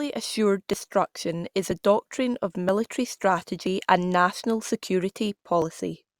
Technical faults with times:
0.73 audio missing between chunks
1.71 audio missing between chunks
2.69 audio missing between chunks
3.67 audio missing between chunks
5.62 audio missing between chunks

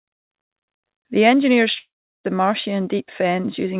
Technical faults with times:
1.78-2.25 long network dropout

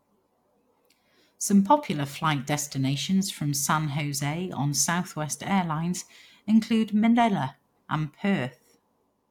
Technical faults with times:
none

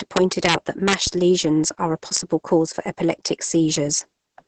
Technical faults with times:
0.00-4.47 Opus voice compression
1.07-1.22 phantom power thump

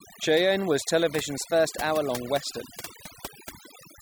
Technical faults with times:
0.00-4.01 overdone noise removal
1.13-2.10 drift correction step

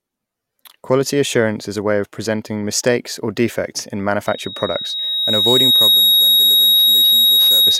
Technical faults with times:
4.27-7.80 loudspeaker feedback squeal

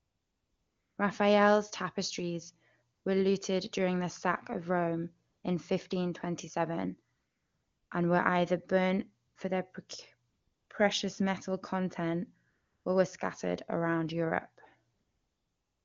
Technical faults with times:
0.00-0.97 AMR comfort noise
2.93-3.05 AMR comfort noise
5.29-5.43 AMR comfort noise
7.15-7.91 AMR comfort noise
9.27-9.35 AMR comfort noise
10.29-10.69 AMR comfort noise
12.49-12.85 AMR comfort noise
14.93-15.84 AMR comfort noise

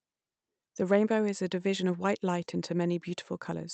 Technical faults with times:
none

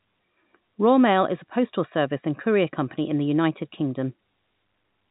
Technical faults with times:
none

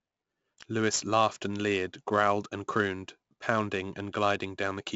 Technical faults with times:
0.00-4.95 4-bit ADPCM compression

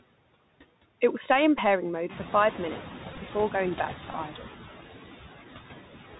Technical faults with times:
0.00-6.19 noise suppressor artifacts
0.00-6.19 Bluetooth CVSD headset codec
1.58 Bluetooth headset packet repeated
2.09-2.94 noise suppressor catching up
3.13-3.18 Bluetooth headset packet repeated
4.11-4.14 Bluetooth headset packet repeated
4.28-4.47 speech cut by the noise suppressor

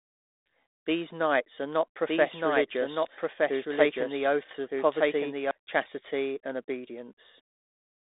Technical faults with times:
2.09-5.51 doubled audio track

